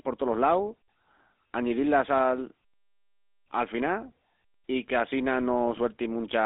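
From start to finish, the speech carries the unmistakable signature of the GSM full-rate codec. The vocal tract is being rebuilt from a coarse, regularly pulsed excitation, which fits the old 13 kbps full-rate coder, and that leaves a buzzy, gravelly grain on every syllable, plainly audible throughout. The band is squeezed to roughly 250 Hz up to 3.7 kHz, so there's no low body and no air on top.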